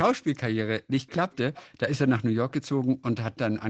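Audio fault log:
1.07–1.12 s and 1.31–1.36 s, echo leak: brief, faint scraps of a delayed copy of the speech, trailing by 283 ms and roughly 30 dB below the direct sound, likely left when the far end's echo canceller let loudspeaker sound reach its microphone and return down the call.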